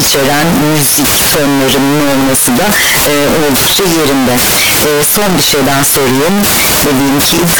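From start to finish the speech is buried in harsh, very loud distortion where even pauses roar as loudly as talking, the sign of signed and unsigned mixed up, likely from 16-bit samples read with the wrong sign convention. The waveform jumps across the whole range at every zero crossing, and the spectrogram shows dense broadband energy throughout.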